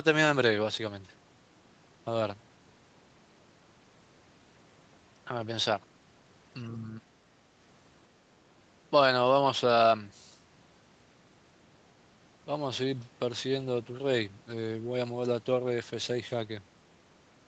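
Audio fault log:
No faults heard in this speech.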